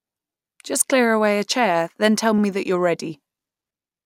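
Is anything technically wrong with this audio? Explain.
Yes. At 2.38 to 2.43 s, between "a chair then tell" and "that you're", repeated frames: a 48 ms block, likely a couple of compressed frames, plays twice, making an audible stutter. On a spectrogram the same short slice appears twice side by side. The clip runs 48 ms longer.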